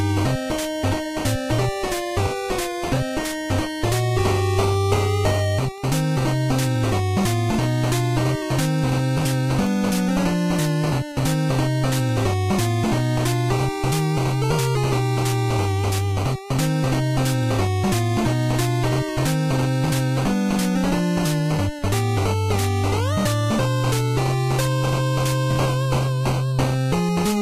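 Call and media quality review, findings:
Regular ticks about every half second, 0.44 to 27.15 s, roughly fifty in all. Word clock ticks: digital receiver not locked to sender, clocks about 40 ppm apart, one sample slipped per tick.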